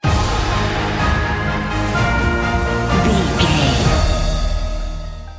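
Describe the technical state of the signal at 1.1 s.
At 1.1 s the signal is intact, with no dropout, distortion, glitch or other technical fault to be heard at that point.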